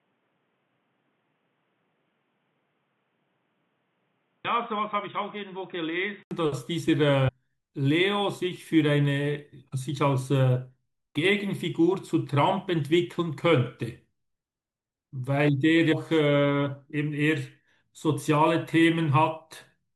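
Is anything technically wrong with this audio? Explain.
Yes. An input switched to a poorer device from the start until 6.31 s: the sound is boxy and dull, with nothing above 3.8 kHz, around 10 dB quieter, and carrying its own faint noise floor. An 80 ms silence at 6.31 s marks the likely change to a fuller input.

Damaged data in a compressed stream occurs at 4.44 s, from 7.27 to 7.30 s, and from 15.91 to 15.93 s. The decoder misreads corrupted frames and loses sync, so each spot is heard as a short chirp or blip.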